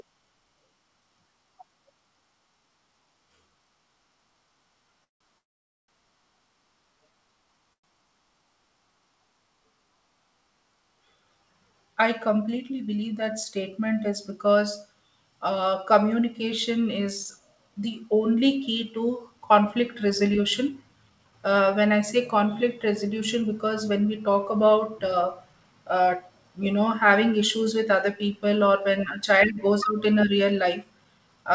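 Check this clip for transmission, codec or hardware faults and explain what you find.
Two faults occur in this speech clip: three call audio freezes early on and four stretches of jitter buffer speed-up later. The audio carries nothing above 8 kHz, which fits a wideband call codec such as G.722 at 64 kbps.

Call audio freeze at 5.04–5.22 s, 5.38–5.90 s and 7.73–7.85 s. Packets were likely held up in transit, so the jitter buffer ran dry. The receiver bridges each hold with a brief continuation that fades to near silence. The pauses last about 0.17 s, 0.5 s and 0.1 s. The speech then resumes where it stopped, delayed rather than cut.

Jitter buffer speed-up at 12.56–13.65 s, 17.69–21.33 s, 22.87–26.59 s and 29.57–31.28 s. After the freezes the buffer held more audio than it needed. To reduce the delay, the receiver trims short pitch-period pieces over and over. The speech plays at 107–108% of normal rate with its pitch unchanged and sounds hurried. 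Each of the two longer stretches loses roughly a third of a second.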